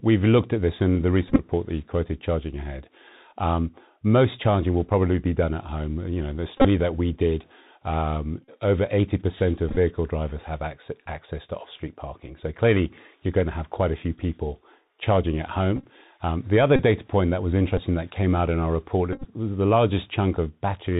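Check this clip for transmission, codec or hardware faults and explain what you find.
The speech is carried through a narrowband Bluetooth headset link, and it breaks up at eight points where headset packets were repeated.

The Bluetooth CVSD headset codec affects the whole clip. CVSD sends one bit per sample, saying only up or down, and adapts its step size. The plainly audible damage fits a 64 kbps CVSD link. Nothing above 4 kHz survives, so the speech sounds muffled and telephone-like. S sounds turn scratchy. Loud bright moments distort where the signal outruns the step. A granular hiss sits under everything.

Bluetooth headset packet repeats occur at 1.28 to 1.40 s, 6.58 to 6.66 s, 8.45 to 8.49 s, 9.69 to 9.77 s, 15.76 to 15.85 s, 16.76 to 16.79 s, 17.78 s and 19.13 to 19.25 s. Lost packets were replaced by decoding the previous packet's bits again. A run of repeats every 3.75 ms produces a rough buzz near 267 Hz. 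The losses total between about 11 ms and 90 ms per event. Continuous runs reach around 30 ms, near 6.6 s, and up to about 34 ms near 8.45 s. The brief 17.78 s event loses only three packets, about 11 ms.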